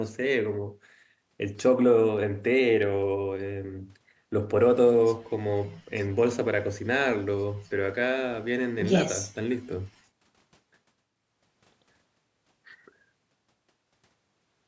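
The speech shows no technical faults, only the usual shaping of call microphone processing, with the lowest bass trimmed by its high-pass filter and nothing present above 8 kHz.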